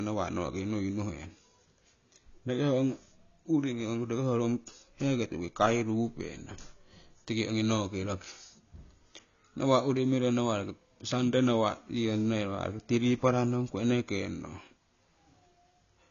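From start to finish the speech sounds dull and smeared, with a fizzy, warbling edge on sibilants. This is likely AAC compression at a low bitrate, around 24 kbps, which discards detail and leaves a hard ceiling: a spectrogram shows nothing above 7 kHz.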